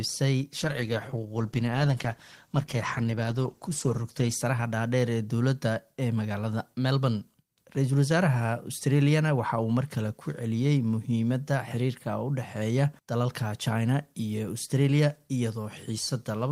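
From 0.61 s to 4.43 s the sound turns rough and watery, with the top end dulled, before clearing again. This is a call bitrate drop: the encoder was starved of bits for about 3.8 s, coding more coarsely at what suggests a fall from roughly 32 to 13 kbps.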